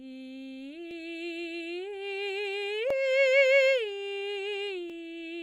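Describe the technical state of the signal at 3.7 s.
At 3.7 s the music plays through cleanly, with no dropout, distortion or other fault in the signal at that moment.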